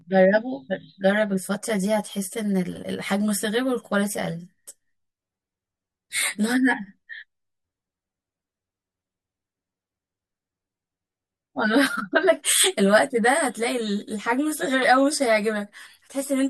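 Speech runs through this clip with a hollow, phasey channel delay (comb filtering) from start to finish. One channel arrives around 10 ms behind the other, and when the two are summed to mono the shared content cancels at evenly spaced frequencies, starting near 50 Hz and repeating roughly every 100 Hz above that. On a spectrogram this appears as a fixed ladder of dark horizontal notch lines cutting through every part of the speech.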